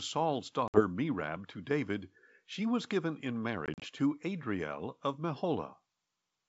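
At 0.68 to 0.82 s, then 3.66 to 3.86 s in scattered short holes, the speech drops out abruptly and resumes slightly distorted. This is packet loss on an ADPCM call: a few lost packets desynchronise the decoder's predictor and step size.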